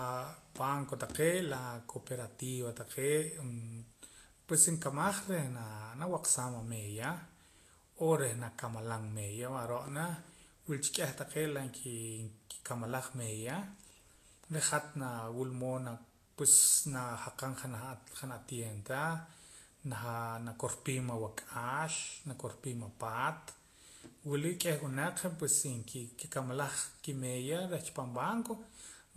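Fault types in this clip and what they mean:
Vorbis compression: the speech was likely passed through a low-quality Vorbis encoder, and the plainly audible damage fits a bitrate near 35 kbps. Nothing remains above 14.2 kHz, and the coarsely quantised treble turns fine detail into hiss, leaving tones grainy and attacks smeared.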